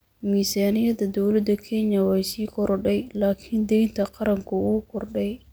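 No technical faults can be heard anywhere in the speech recording, with the signal staying continuous and stable throughout.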